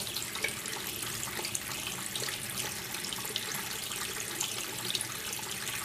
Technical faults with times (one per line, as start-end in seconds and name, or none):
none